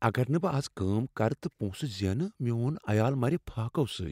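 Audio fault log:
No faults found in this speech recording.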